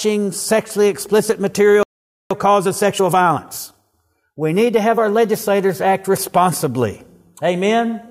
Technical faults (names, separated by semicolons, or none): playback stall; time-compressed catch-up